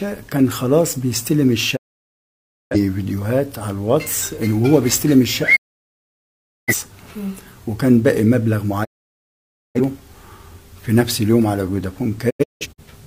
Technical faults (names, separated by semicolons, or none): digital broadcast dropout